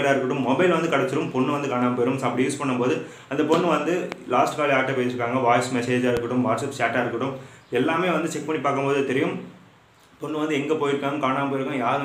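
Two loud pops land at about 4.12 and 6.17 s, each a single sharp hit well above the sound, which carries on underneath, likely from an electrical glitch.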